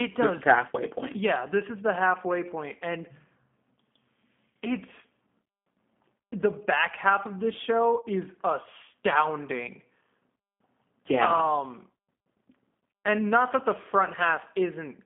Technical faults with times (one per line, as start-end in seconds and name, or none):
0.00-15.05 G.729 codec
8.01-8.07 VoIP packet loss concealed by the speech codec